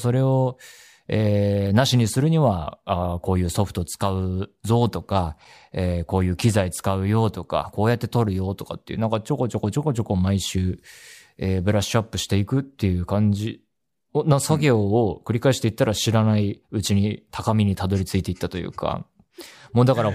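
No technical faults can be heard anywhere in the recording, and the speech signal stays intact and continuous throughout.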